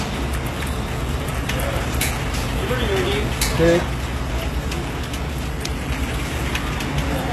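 A recording of everyday sounds carries plainly audible HE-AAC compression damage from start to finish, likely from encoding at a very low rate, which fits roughly 16 kbps. The treble stays bright but is rebuilt rather than real: spectral band replication copies lower bands upward, so the upper harmonics don't line up and sharp, hissy sounds turn gritty and metallic, with nothing at all above 12.3 kHz. Ordinary low-bitrate coding would sound dull and muffled instead.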